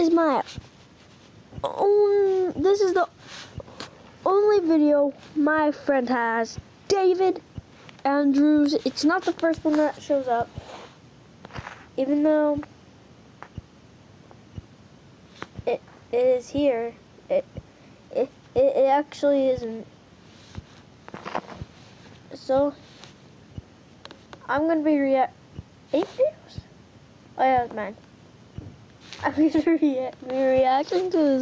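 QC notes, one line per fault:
Throughout, gain pumping: the level swings by about 5 dB, so loud and quiet parts sit squashed close together. That's likely the input gain set far too hot for the mic, with a fast limiter or compressor clamping down on every peak and letting go between them. The call mic processing's usual bass roll-off and the top end stopping around 8 kHz are expected.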